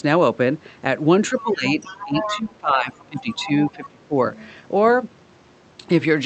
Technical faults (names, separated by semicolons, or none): speech suppressed in double talk; other side's voice leaking through